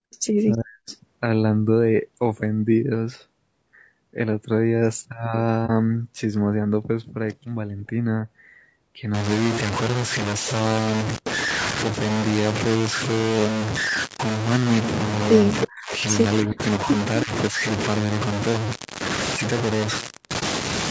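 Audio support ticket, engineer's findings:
Rough, grainy voice throughout, with noise filling the gaps between harmonics and a thin, synthetic-sounding top, band-limited at 8 kHz by the call's microphone processing. Likely cause: low-delay AAC compression (AAC-ELD) at 32 kbps. Its short frames resolve pitch harmonics poorly, and at this bitrate the encoder runs out of bits for the fine structure. Damage plainly audible for the full clip.

Room sound collapses at the very start, 0.00 to 0.11 s, dipping by about 40 dB for roughly a tenth of a second before recovering. Background gated by the echo canceller: it clamped the mic hard while the far-end loudspeaker was active, then released.

Faint delayed copies of the voice in brief scraps at 0.12–0.17 s, 0.52–0.57 s and 0.90–0.94 s, 324 ms behind the original, about 30 to 35 dB below the speech. Echo leak at the far end is the likely cause: that side's echo canceller let residual loudspeaker pickup through and sent it back.

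Voice dips and breaks up in pieces at 0.55–0.89 s, 15.65–15.93 s, 16.43–16.87 s and 17.24–17.58 s. Suppression is deep in the first two, down around 40 dB, easing to moderate and then shallow in the last two. Each episode lasts a few hundred milliseconds. Likely speech suppressed in double talk: with both sides talking, the canceller couldn't separate the local talker from echo and attenuated everything.

Two brief dips: 5.66–5.70 s and 20.39–20.43 s, each 30 ms. AAC frame loss with muting. One frame was lost each time and the decoder zeroed its spectrum, so the overlapping windows faded out and back in.

From 9.14 s to the end, heavy gritty distortion that tracks the signal, with quiet passages sputtering or dropping to nothing. Error sits only about 5 dB below the signal. Likely cause: low bit depth without dither, with truncation to 3 bits. Rounding error correlates with the audio instead of forming a steady noise floor.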